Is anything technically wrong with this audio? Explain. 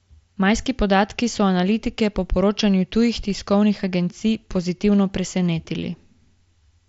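No, nothing technically wrong can be heard here.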